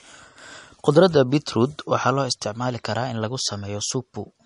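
From start to finish the speech sounds watery and swirly, with nothing above 10.6 kHz, most likely from MP3 compression at a low bitrate, around 40 kbps. Starved of bits, the encoder chops the treble and lets weak frequency lines flicker between frames.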